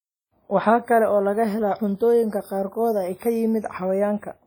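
Throughout the speech, heavy transform-codec damage, likely WMA compression at a low bitrate around 32 kbps, leaves washy, ringing smearing and breathing hiss; nothing passes above 19.9 kHz.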